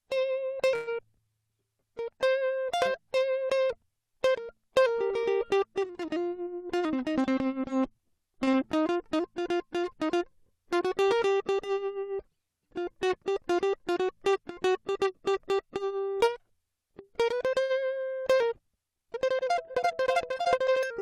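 From 0.75 to 0.89 s the music hangs on its last sound as a fading buzz for 116 ms, then resumes exactly where it stopped, most likely a call audio freeze. Unlike packet loss, nothing is skipped; the music simply waits.

At 0.97 to 1.00 s a short concealed packet loss replaces 40 ms of real audio with a brief smear. The music jumps forward rather than pausing.

From 6.39 to 7.41 s a jitter buffer speed-up plays at 110%, removing about a tenth of a second. From 15.21 to 16.00 s a second one plays at 105%, removing about 50 ms. Pitch holds while the tempo briefly hurries, then settles.

A short stall from a late packet at 8.44 to 8.49 s holds a sound 34 ms too long. Nothing is lost, and it is shorter than the freeze. Another concealed loss follows at 8.51 to 8.55 s, covering 20 ms. A further stall at 17.63 to 17.71 s holds the sound for 68 ms.

From 18.85 s to the end, the pace abruptly jumps to 1.54 times at the same pitch. 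It sounds rushed, likely a time-stretched section. It is sharper and sustained, unlike the buffer's brief catch-ups.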